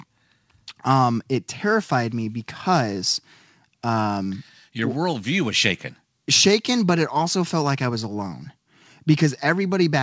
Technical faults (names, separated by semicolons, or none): none